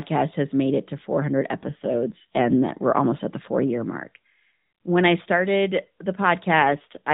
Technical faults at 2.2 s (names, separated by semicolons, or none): AMR rate drop